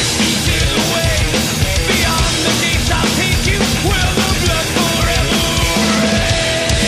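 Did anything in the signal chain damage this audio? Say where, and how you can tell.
Yes. Loose connector crackle in the analogue wiring, 4.23 to 4.31 s. A brief irregular scratchy burst. A dirty contact was making and breaking, chopping the signal.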